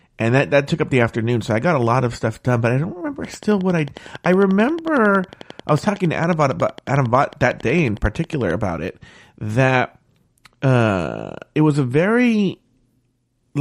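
A train of clicks runs from 3.25 s to 8.52 s: a steady ticking at 11 clicks per second, regularly spaced, about fifty in all. Each click has much the same sharp shape and peaks about 5 dB above the speech, so the ticking stays clearly audible over the talking and just as plainly in the pauses. The likely cause is a repeating electrical pulse, such as interference from nearby equipment or a faulty connection or power supply.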